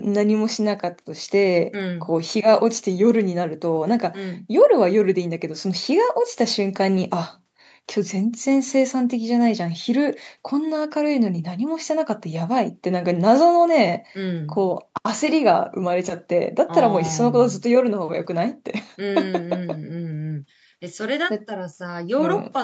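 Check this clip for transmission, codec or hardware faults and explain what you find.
No transmission, codec or hardware faults can be heard in this speech recording. Nothing reaches above 8 kHz, which fits a wideband call path through the Opus codec, with the microphone processing's high-pass filter trimming only the lowest bass.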